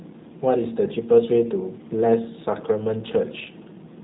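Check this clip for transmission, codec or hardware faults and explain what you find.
One codec fault runs through the whole clip. The speech has the G.729 codec sound from start to finish: plainly rough, slightly synthetic and buzzy, with the thin quality of telephone VoIP. The codec discards the waveform and resynthesises each 10 ms frame from a vocal-tract filter, a pitch predictor and a few pulses, which fits an 8 kbit/s stream. A spectrogram shows a hard ceiling with nothing above 3.8 kHz and coarse, smeared harmonics.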